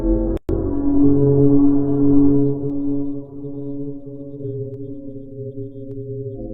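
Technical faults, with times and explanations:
0.37 to 0.49 s, gap at a join of encoded pieces: the sound cuts out for about 117 ms, then picks up where it left off. Two separately encoded pieces were butted together with the encoder's start-up silence and last-frame padding still in, giving smeared edges.
2.70, 4.74 and 5.91 s, dropped samples: three isolated sharp clicks, each a thin line straight up the spectrum. They're likely a tiny fraction of a millisecond of samples going missing, so the waveform snaps to a later value without any audible hole in the sound.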